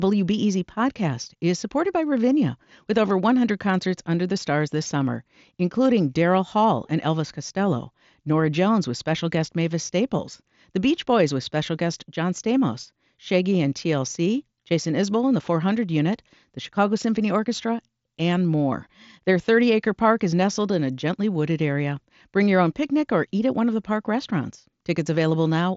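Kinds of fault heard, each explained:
No kinds of fault are heard in this speech.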